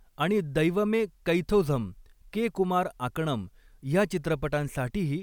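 No technical faults can be heard anywhere in the recording. The speech runs continuously, with no audible disturbance at any point.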